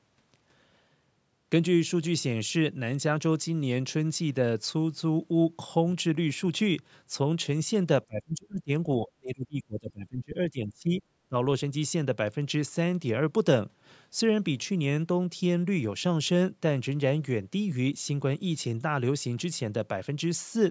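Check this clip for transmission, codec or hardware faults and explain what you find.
One fault stands out, in three bursts. Speech suppressed in double talk, at 8.06 to 8.7 s, 8.99 to 11.01 s and 11.29 to 11.35 s, is likely an echo canceller mistaking the talker for loudspeaker echo while both sides spoke. The speech dips as much as about 30 dB. The call's microphone processing passes nothing above 8 kHz.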